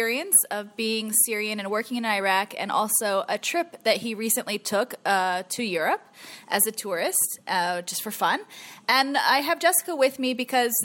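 No technical faults can be heard anywhere in the audio.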